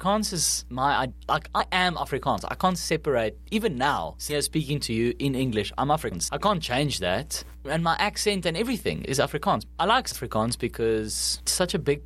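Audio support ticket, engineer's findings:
Mains hum, continuous across the clip: steady 60 Hz tone with low harmonics, about 20 dB below the speech. Probable ground loop or nearby transformer coupling the power line into the signal path.

Compressed frames skipped at 1.59 s after "is my like", 4.29–4.34 s, 6.11–6.14 s before "I can't change that", and 10.11–10.16 s after "I like". Speech jumps ahead roughly 100, 200, 200 and 300 ms. Jumps fit whole 20 ms codec frames lost or rejected by the decoder.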